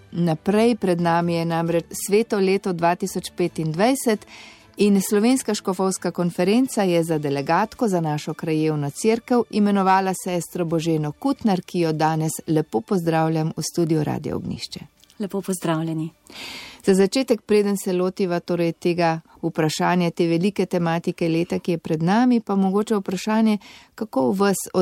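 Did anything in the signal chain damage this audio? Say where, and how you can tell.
Yes: a stage overran full scale by about 2 dB, so hard clipping flattened peaks from 9.87 to 9.96 s, adding high harmonics heard as brief crackle.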